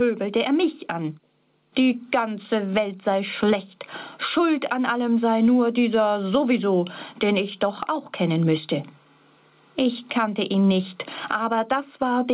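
Gain pumping runs through the whole clip. The gain ducks under each loud sound, swinging by around 20 dB. The likely cause is gain set far too high, with a fast limiter clamping down. The band stops near 4 kHz.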